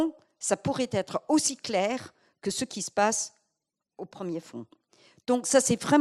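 At 1.47 to 1.51 s a corrupt frame is decoded: damaged bits in the compressed data reach the decoder, which plays them anyway, so misread gains and codes put energy at wrong frequencies. The 40 ms burst, consistent with about two frames, sounds like a loud glitch peaking near -10 dBFS. A second corrupt frame at 2.73 to 2.76 s lasts 23 ms, matching a single frame, and gives a fainter glitch around -25 dBFS.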